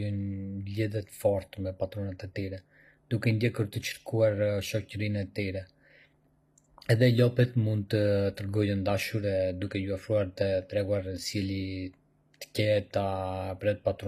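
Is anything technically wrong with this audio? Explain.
Yes. Throughout the speech, the high end has a synthetic, metallic sheen, and s sounds come across gritty or lispy rather than crisp, with nothing at all above about 15.5 kHz. This is plainly audible and is likely HE-AAC compression at a low rate, fitting roughly 24 kbps. The codec keeps only the lower spectrum and fakes the treble by copying lower bands upward under a coarse envelope, so the upper harmonics don't line up with the real ones.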